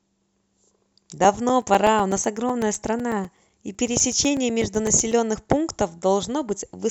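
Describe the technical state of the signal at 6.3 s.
At 6.3 s the speech signal is intact, with no audible fault at that moment.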